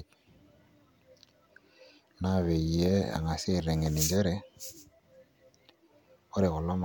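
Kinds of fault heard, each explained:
No technical fault can be heard in this speech recording; the signal stays continuous and intact throughout.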